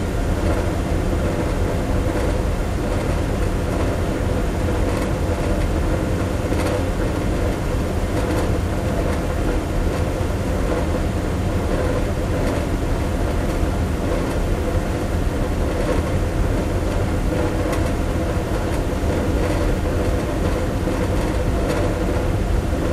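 No technical faults can be heard anywhere in the audio.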